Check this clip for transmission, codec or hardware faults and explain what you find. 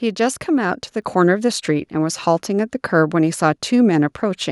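One fault is present: a microphone volume stepped up at 1.02 s. The call software judged the microphone input too quiet and raised the device's input volume in a single step rather than gradually, adding about 5 dB of gain. Because the change is applied to the whole input, the speech and the background noise jump up together at that instant, with no fade, and the audio stays at the higher level from then on.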